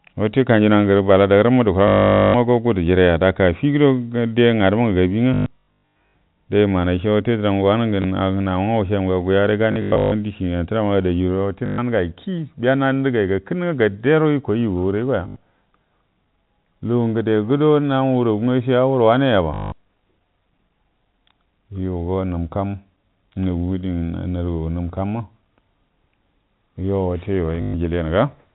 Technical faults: packet loss with last packet repeated

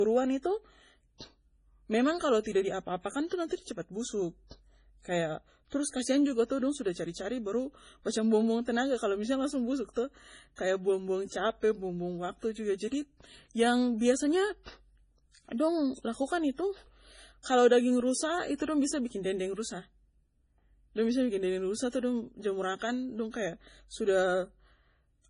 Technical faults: MP3 compression

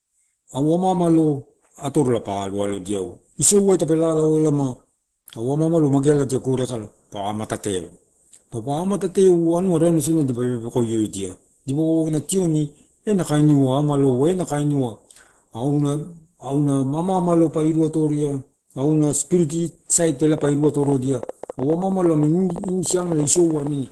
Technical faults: Opus compression

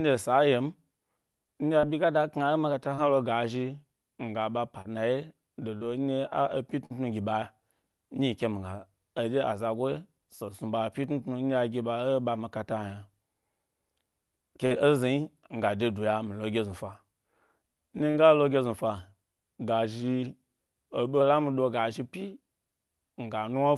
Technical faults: short concealed packet loss; drift correction step; burst of packet loss

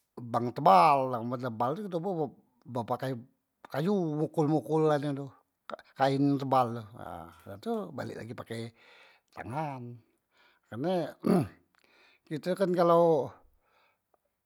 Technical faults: none

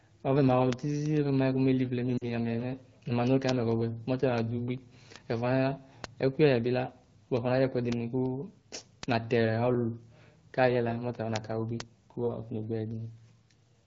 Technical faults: lost AMR speech frames; block of digital silence

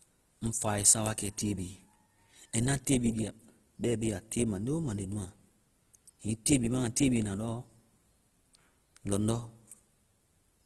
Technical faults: Opus compression

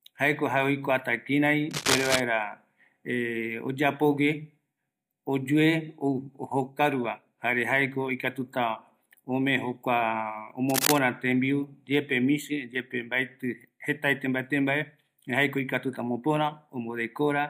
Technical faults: cable scratch noise

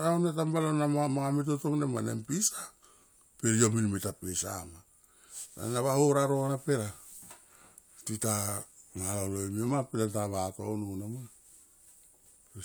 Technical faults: none

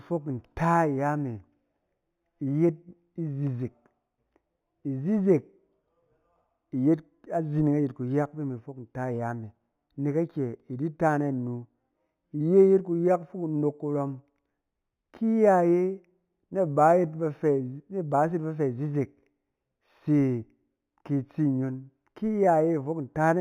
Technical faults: imaging from linear upsampling

